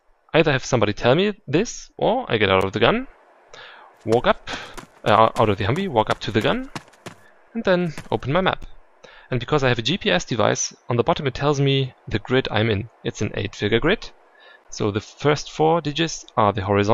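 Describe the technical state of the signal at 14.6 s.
At 14.64 s a gap between chunks drops in 12 ms of silence at a chunk join, fitting 6-second chunks. The waveform flatlines with hard edges, and the spectrogram shows a thin blank vertical stripe.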